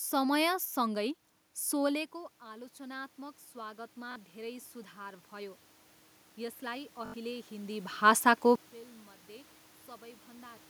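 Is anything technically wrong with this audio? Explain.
Yes, there are two kinds of fault, each occurring twice.

Automatic gain rising runs from 1.92 to 5.66 s and again from 6.36 to 8.03 s. After the level at the microphone drops by about 17 dB around 2 s, the gain control slowly adds about 8 dB, and later about 4 dB. Unlike a talker moving closer, the room noise swells along with the voice, and the rise is gradual, spread over a second or more.

Bluetooth stutter occurs at 4.12 to 4.16 s and at 7.06 to 7.14 s, covering about 41 ms and 81 ms. Packets went missing, which points to two and then four lost packets. The receiver repeated its last short slice of audio, producing a brief buzzing stutter. A plain dropout would be silent, but here the sound repeats, and afterwards it resumes further on, as if it had kept playing underneath.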